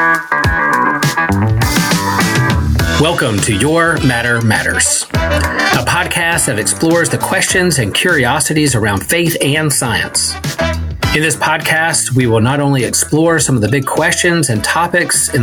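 Throughout the clip the input gain is likely set far too high for the microphone, so a fast limiter or compressor keeps clamping down whenever a loud sound arrives, then releasing in the quiet that follows. The result is gain pumping, with the level moving by roughly 15 dB. Loud and soft moments sit unnaturally close together, and the whole recording sounds squashed.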